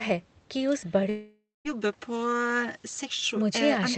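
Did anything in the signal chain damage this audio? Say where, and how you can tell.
Yes, at the network stage. From 1.09 s to 1.67 s the speech stops and about 560 ms of it never returns. The last sound is stretched into a fading buzz. By the end of the gap, about 180 ms of near silence remains. Speech then resumes mid-flow, with nothing replayed. This is likely a long network dropout. No packets reached the receiver, so its concealment extended the final sound until it ran out and gave way to silence.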